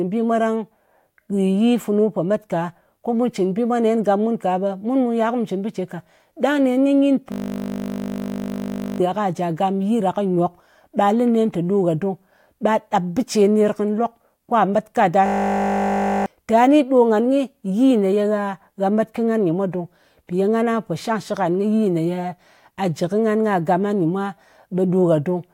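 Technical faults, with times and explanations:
7.32–9.00 s and 15.26–16.26 s, system hang loop: the playback system stalled while the audio hardware kept replaying its last 20 ms ring buffer, so a single short slice of sound repeats exactly, 84 times after "kɨ nyin" and 50 times just before "tà ni". At a 50 Hz repeat rate this becomes a steady buzz, not a stutter. About one and a half seconds and about one second of the original audio are lost.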